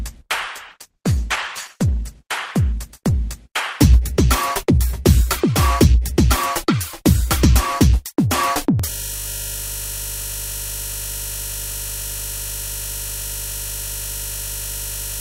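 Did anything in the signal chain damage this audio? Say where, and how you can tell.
Yes. From 0.69 s to 5.59 s the audio turns muffled and watery, coarsest for about a second. This is a call bitrate drop at the codec stage: the encoder was pushed from 96 kbps down to 11 kbps, coding more crudely and discarding high frequencies.

From 8.90 s to the end, the sound freezes into a steady buzz at 50 Hz. This is a system hang loop in the driver or buffer stage: the system stalled while the hardware kept replaying the same 20 ms of buffered audio over and over.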